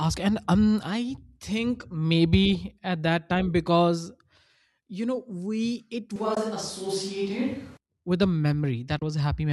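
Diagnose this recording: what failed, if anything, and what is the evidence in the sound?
From 6.16 to 7.77 s the sound turns roomy and hollow at similar level. Room noise rises to about 25 dB below it, likely a switch to a distant microphone. The spectrogram shows thinner lows and smeared tails.

AAC frame loss with muting occurs at the codec or network stage, with soft-edged silences at 6.35 s (20 ms) and 8.99 s (30 ms). These fit two and three lost 10 ms frames zeroed by the decoder. The waveform fades out and back in.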